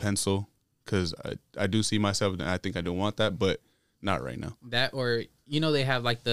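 At 3.04 s, between "I think I do" and "that but not right", one sharp click is heard. It is likely dropped samples: a handful, about a tenth of a millisecond, missing, so the waveform jumps abruptly. Unlike a dropout, no audible sound disappears.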